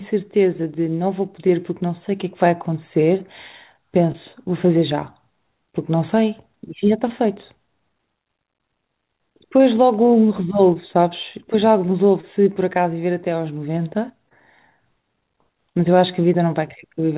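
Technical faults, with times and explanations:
4.12, 7.08, 10.74, 12.21 and 14.29 s, short concealed packet loss: brief smears or wobbles as about 20 ms of the call arrived too late to decode. Each time, the receiver extended the preceding sound to cover the gap, then blended back into the real signal, within the 4 kHz narrowband call audio.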